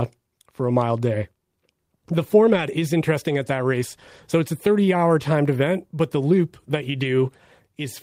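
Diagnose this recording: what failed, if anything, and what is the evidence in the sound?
The network dropped packets, and what you hear is lost packets rebuilt from error correction, not dropouts. There's no gap anywhere. At 1.21 s and 7.01 s the speech turns briefly rough and grainy for about 20 ms. From 2.49 to 2.63 s there's a longer stretch with that coarse texture, around 80 ms of it in all, which fits four separate packets lost. Opus in-band FEC filled each hole from the low-bitrate copy carried in the next packet, which keeps continuity but loses detail.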